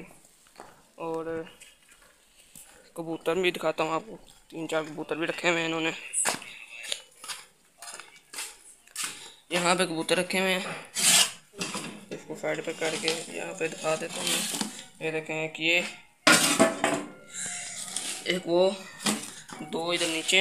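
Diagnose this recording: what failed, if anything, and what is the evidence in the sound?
A loud pop, two sharp hits in quick succession between 17.46 and 17.69 s, rises a few decibels above the sound, which carries on underneath. The likely cause is an analogue voltage transient from a plug or switch, shaped by the circuitry downstream.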